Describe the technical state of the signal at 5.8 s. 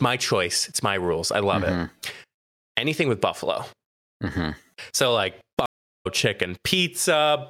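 Stream reconnect, 5.66 to 6.07 s: the connection broke and decoding restarted mid-stream, leaving 390 ms of silence before speech resumes about 0.4 s further on.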